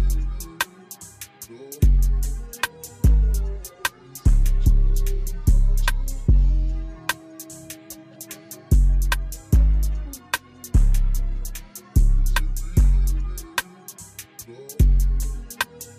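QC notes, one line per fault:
No faults heard in this audio.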